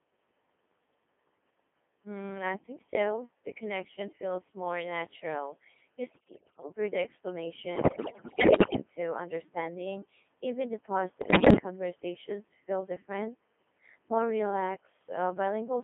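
Throughout, the speech carries a Codec 2 vocoder sound: robotic and buzzy, rebuilt from pitch, voicing and envelope rather than the original waveform, at a rate that fits about 2.4 kbit/s. The spectrogram shows neat, synthetic harmonic combs confined to 250 Hz to 3.4 kHz.

Bit errors on digital voice radio strike at 6.11 to 6.70 s, 7.76 to 8.82 s and 11.22 to 11.58 s, just before "conversations feel different". With roughly one bit in five to seven flipped, the decoded frames jump wildly in pitch, level and tone colour, producing warbling bleeps and gibberish. These appear as jagged envelope spikes and scrambled harmonic tracks.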